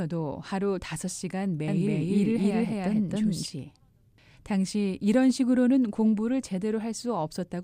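From 1.68 s to 3.46 s the speech carries a doubled audio track. An equally loud copy trails about 300 ms behind, likely from a slower second capture path or a misaligned edit. It cuts in and out abruptly, and a spectrogram shows each syllable repeated as a crisp full-band ghost.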